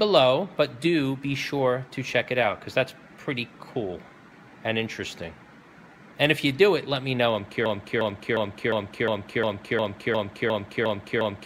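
The player or stream likely stalled at 7.66 s and kept resending the last fragment it held, producing a broken-record loop: a 0.36 s piece repeats exactly, back to back, 11 times through to the end, replacing whatever audio should have followed.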